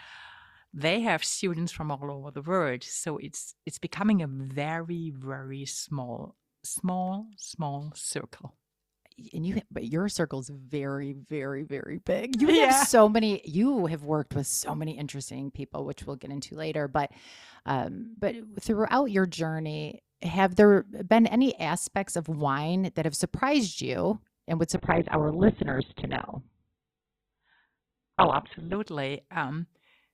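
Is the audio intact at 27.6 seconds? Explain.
No. At 27.6 s the speech falls inside an adaptive stream at a lower bitrate, running from 24.76 to 28.76 s. The player switched to a much leaner encoding when the connection slowed. The sound fits a drop from about 64 kbit/s Opus to 8 kbit/s. The treble vanishes and the speech turns dull. A spectrogram shows an abrupt flat ceiling near 4.2 kHz across that span, while the waveform continues with no gap.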